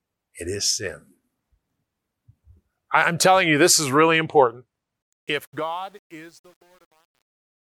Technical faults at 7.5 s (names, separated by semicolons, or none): truncation distortion on a fade